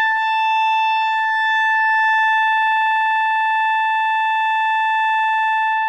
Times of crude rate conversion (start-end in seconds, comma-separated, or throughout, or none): none